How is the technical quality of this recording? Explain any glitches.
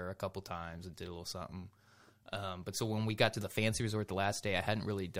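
Nothing glitchy turns up here; the recording runs along without any dropouts, clicks or other technical hiccups to point to.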